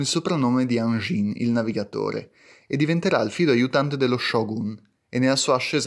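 Nothing stood out on listening to this speech recording.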